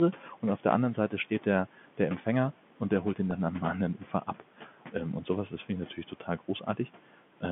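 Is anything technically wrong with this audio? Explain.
Yes, two faults stand out in this speech.

At 3.31 s there is a very brief held, buzzy moment where the sound seems to stick for an instant. This is packet loss with pitch repetition: about 10 ms of audio went missing, which fits a single lost packet, and the receiver filled the hole by replaying the most recent pitch cycle. Because the gap is so short, the repeat never has time to fade out and is heard only as that small sustained buzz.

Between 5.96 and 6.88 s, parts of the speech sound swallowed or faint, dipping by about 10 dB at the deepest point across roughly a third of a second in total. This is speech cut by the noise suppressor: the suppressor mistook some speech energy, such as soft consonants, word endings or a quieter phrase, for background and lowered it along with the room noise. That room noise sits about 22 dB below the speech, and the G.711 telephone coding confines everything to the line band of roughly 150 Hz to 3.5 kHz.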